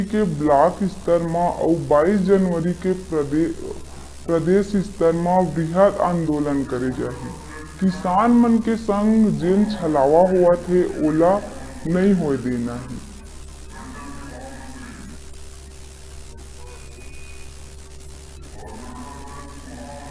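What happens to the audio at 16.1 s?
At 16.1 s, as throughout the clip, the audio suffers from a wrong sample rate. It plays at 0.689 times its proper speed with no conversion, which fits 32 kHz material played at 22 kHz. Everything sounds slowed and dropped about 6.5 semitones in pitch.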